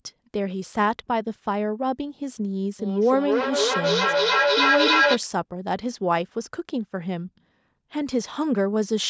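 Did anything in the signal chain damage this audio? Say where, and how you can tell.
Yes. From 2.8 to 5.2 s there is feedback echo between two devices, an acoustic loop in the call path: each syllable returns roughly every third of a second, thinner and ringing, and builds to about 4 dB above the speech. A room reflection would die away instead.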